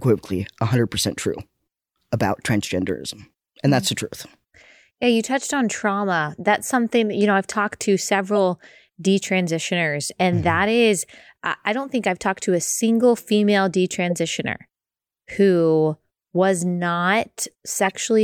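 Corrupt frame decoded at 14.10 to 14.13 s, just after "to a single female", and again at 17.85 to 17.92 s in this speech clip. Damaged compressed frames, a couple and then a few, were played anyway, spraying misplaced energy as brief bursts peaking around -15 and -10 dBFS.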